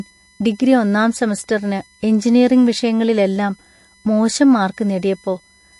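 From start to finish a thin, steady USB whine sits under the speech at 1 kHz, loudest at its 2 kHz harmonic, about 35 dB below the speech. Current drawn in 1 ms bus frames leaks into the power or ground, and a spectrogram shows it as unbroken horizontal lines at 1 kHz and 2 kHz.

Throughout, the speech also has a plainly audible watery, swirling quality with smeared consonants, and nothing is present above 11.3 kHz. This is likely MP3 compression at a low bitrate, consistent with 48 kbps: the encoder cuts the treble and discards weak frequency components. On a spectrogram this appears as a hard ceiling at 11.3 kHz, with patchy, flickering holes beneath it.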